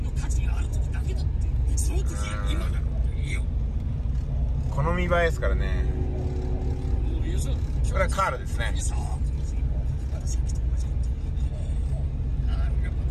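Nothing here trips the ear at any point: there are no dropouts, glitches or other technical faults anywhere in the audio.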